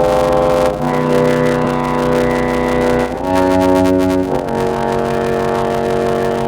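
From start to end, a block size mismatch (padded) leaves short zero-filled gaps in every block, which fits a 512-sample read buffer. This produces a steady 93.8 Hz buzz and slows the sound to 0.625 times normal speed at about its normal pitch. On a waveform these show as regular dropouts, and on a spectrogram as evenly spaced vertical stripes.

At 1.65 to 1.67 s, 3.15 to 3.17 s and 4.71 s, lost LE Audio frames are concealed by the LC3 decoder reusing the previous spectrum with random signs. Each is heard as a brief noisy smear, and on a spectrogram as a blurred patch.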